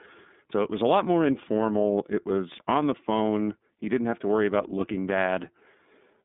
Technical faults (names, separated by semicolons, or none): iLBC codec